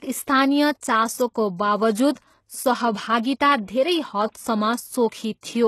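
A speech clip whose treble sounds gritty and metallic throughout, with sibilants turning lispy and harmonics failing to line up across the upper band. This is plainly audible codec damage, likely from HE-AAC compression at a rate that fits roughly 16 kbps. A spectrogram would show the upper band as copied, smeared patches with nothing above 12.3 kHz. There is also a pre-echo from 3.66 to 3.68 s: a short hiss about 27 ms long runs ahead of an attack and softens it, visible on the waveform as raised noise before the transient.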